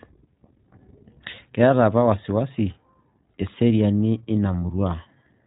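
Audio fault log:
Throughout: iLBC codec. The speech is band-limited to telephone width, with nothing above about 3.8 kHz. Each 20 ms frame's excitation is coded on its own without reference to the previous one, which leaves a clearly audible rough, slightly synthetic quality, consistent with the 15.2 kbps mode. A spectrogram shows a hard ceiling near 3.8 kHz with blank space above. The harmonics below it look smeared and slightly blocky at 20 ms intervals.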